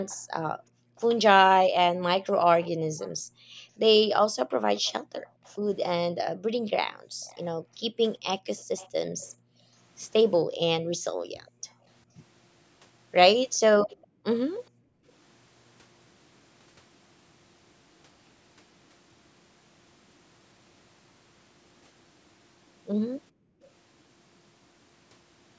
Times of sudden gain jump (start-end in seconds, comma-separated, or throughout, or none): none